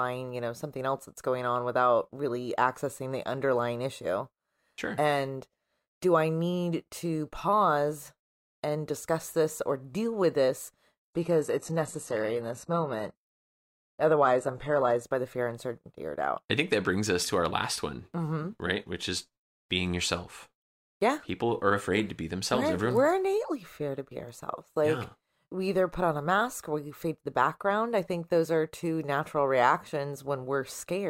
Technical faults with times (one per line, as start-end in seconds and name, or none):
11.04-15.04 adaptive stream at a lower bitrate